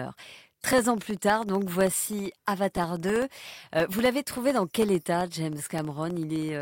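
From 0.08 to 6.55 s, periodic USB or driver dropouts tick through the speech. Every 0.064 s, something stalls the audio path, and about half a millisecond drops to silence. Roughly a hundred evenly spaced clicks result, audible only while sound is present.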